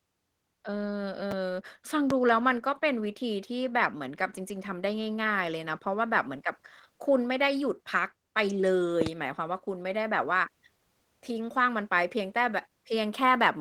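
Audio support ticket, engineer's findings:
Opus voice compression throughout: speech sounds muffled and a bit hoarse and robotic, with coarse excitation coding in hybrid mode. Fits a bitrate around 16 kbps. Damage plainly audible.

Chunks out of order at 1.31 s: brief jumbled moment where a 5.8 ms chunk plays one chunk late, leaving three hard joins. Points to a buffering or write-ordering slip.

Loud pop at 2.10–2.13 s, then a double pop at 9.01–9.09 s, each about 15 dB over the speech, which continues underneath. Likely a plug, switch, static or driver glitch.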